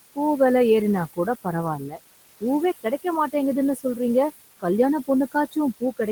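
A speech recording carries noise suppressor artifacts throughout. The suppressor pulls the steady room noise, which sits about 14 dB below the speech, down by about 19 dB between phrases and lets it back up under them. On a spectrogram the background floor pumps dark and light in step with the speech. Speech cut by the noise suppressor occurs twice, at 1.78–2.0 s and 3.76–3.99 s, where the suppressor mistook quiet speech for noise. Roughly a tenth to a sixth of a second is turned down, by about 13 dB and about 10 dB respectively, so those sounds come across swallowed. The waveform shows sudden dips in the envelope there, and the spectrogram shows faint, thinned patches.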